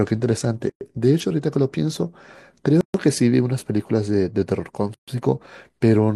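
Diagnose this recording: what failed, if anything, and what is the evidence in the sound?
Separately encoded segments were joined at the codec stage without trimming each run's start-up delay and last-frame padding. This leaves a gap at a join of encoded pieces every 2 s: 0.70–0.81 s (114 ms), 2.81–2.94 s and 4.94–5.08 s (133 ms each). Edges are smeared by the codec, and the speech resumes where it stopped.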